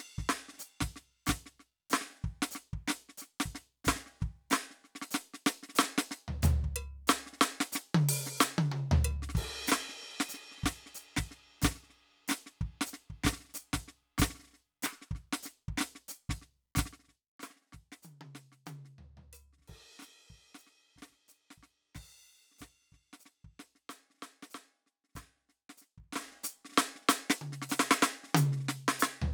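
From 25.96 to 26.36 s, a level move on the music produces zipper noise: the gain jumps in 2 dB steps, around thirty times a second, covering about 20 dB in 0.4 s with no smoothing between steps. Each jump leaves a small click, so a fast ticking, zipping texture rides on the music only while the level is moving.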